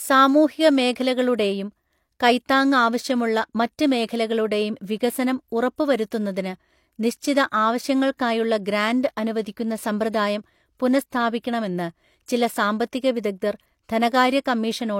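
Low-bitrate audio saved at a high bitrate runs throughout the speech. Nothing sounds above 16.3 kHz, and the smeared, watery texture of a low-bitrate encoding remains. This likely comes from a low-rate HE-AAC source re-encoded as high-rate MP3, which cannot restore what was discarded.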